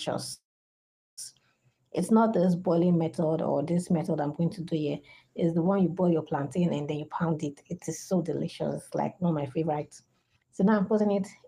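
At 0.33 s the sound stalls until about 1.19 s, a call audio freeze. There's a brief carry-on of the last sound, then roughly 770 ms of silence, about 0.84 s of filler in all. When it picks back up, it continues right where it left off, so nothing is lost, but everything after it now runs about 841 ms late. The likely cause is packets held up in transit, leaving the jitter buffer empty.

Later there are two stretches of jitter buffer speed-up, from 6.93 to 8.31 s at about 120% speed and from 8.95 to 11.17 s at about 121%. The receiver is trimming small pitch-period-sized slices over and over to pull that extra delay back down, roughly 0.3 s in the first stretch and about half a second in the second. The pitch holds, but the sound comes across noticeably hurried through both spans.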